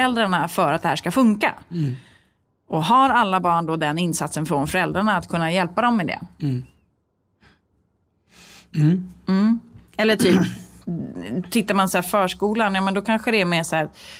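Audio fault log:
Nothing to log here, as this speech recording comes through without a single fault to flag anywhere along its run.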